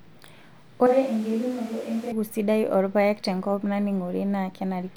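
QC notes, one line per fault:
0.87–2.12 s, switch to a distant microphone: the speech abruptly turns roomy and hollow, loses low end, drops about 5 dB and sits over a noise floor only around 25 dB below it, then snaps back just before "sidai oorpaek tenkop". The likely cause is a camera or room mic covering for a failed close mic. On the waveform the envelope steps down and back up sharply at the edges. The spectrogram shows thinner bass, reverberant tails and a raised broadband floor.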